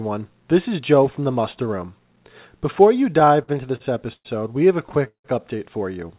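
Repeated stalls (stutter) affect this speech clip from 3.2 to 4.27 s and again from 4.89 to 5.26 s. Packets reached the receiver late, so its jitter buffer kept running empty, and the last sound was stretched to bridge each wait. The longest wait is 0.17 s, and in the second stretch about half the time is filled this way. Nothing is lost, but the delivery drags and stutters. The call path is narrowband, leaving nothing above 4 kHz.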